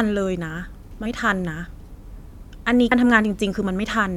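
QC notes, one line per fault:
1.05 s, compressed frames skipped: about five 23.2 ms frames are left out, so speech jumps ahead roughly a tenth of a second, joined by a brief smeared blip.
2.91 s, compressed frames skipped: about four frames are dropped, cutting out roughly 100 ms of speech. Overlapping neighbouring frames blur the join into a brief smear, not a click.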